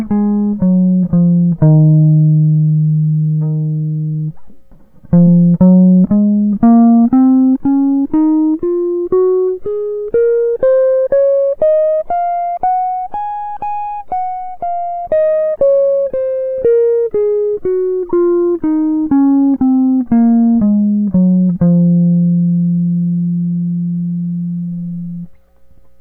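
A corrupt frame decoded at 18.09 to 18.12 s breaks into the music as a short blip of misplaced noise lasting only a few hundredths of a second. Damaged bits inside a small run of compressed frames, which sounds like about three, were read as if valid, so the decoder applied wrong gains and misread spectral codes, scattering energy into the wrong frequencies. The stray burst peaks at roughly -20 dBFS.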